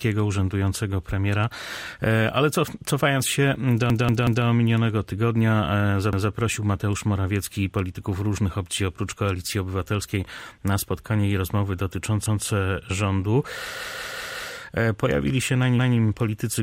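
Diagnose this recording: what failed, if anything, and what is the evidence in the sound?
Driver or buffer stage, repeated buffer. A roughly 186 ms chunk restutters with hard joins at 3.90–4.46 s (three extra plays), 6.13 s and 12.26 s (once each), and 13.75–14.49 s (four). Fresh audio arrived late, so the device replayed its last block, which fits an 8192-sample buffer.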